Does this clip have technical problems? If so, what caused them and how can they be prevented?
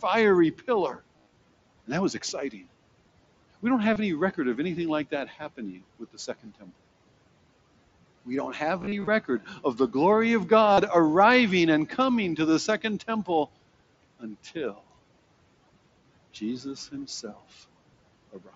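Yes. Concealed Bluetooth headset packet loss occurs at 1.17–1.36 s, 3.93–3.96 s before "any record of anything", 8.79–9.07 s before "of the glory of", and 10.73–10.78 s before "arriving and coming to". The phone filled the missing headset packets by repeating recent waveform, so the gaps sound like brief buzzy, held tones. Keeping the phone close to the headset and away from 2.4 GHz interference prevents this.

Speech cut by the noise suppressor occurs at 5.99–6.70 s, 14.20–14.56 s and 18.33–18.55 s. The dips reach about 15, 12 and 16 dB. The suppressor mistook quiet parts of the speech for background and turned them down, so fragments sound swallowed. Using a gentler suppression setting prevents this.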